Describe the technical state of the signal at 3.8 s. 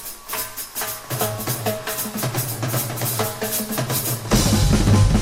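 At 3.8 s the signal is intact, with no audible dropout, click, distortion or other fault at that moment.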